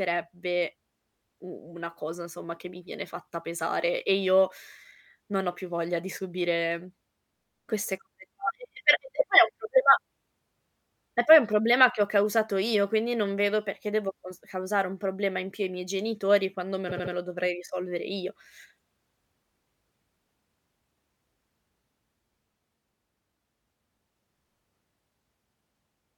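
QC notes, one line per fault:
16.89–17.13 s, repeated frames: a short run of compressed speech frames was stored or sent more than once, so the decoder replays the same 78.4 ms block three extra times. The speech stutters as one fragment restarts back to back. The stretch grows by about 235 ms, which fits three extra plays of the 78.4 ms block.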